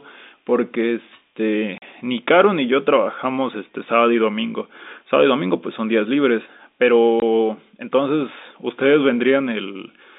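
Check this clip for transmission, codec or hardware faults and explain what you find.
Two short dropouts were found, both from packet loss filled with silence. The audio otherwise passes over G.711 telephone coding, limited to roughly 200 Hz to 3.7 kHz.

At 1.78–1.82 s (40 ms) and 7.20–7.22 s (20 ms), stretches were replaced by silence, which fits lost 20 ms packets. The waveform drops abruptly to near silence, and the spectrogram shows a clean vertical blank.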